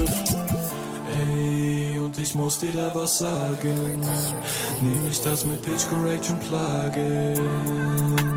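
No technical faults can be heard anywhere in this recording.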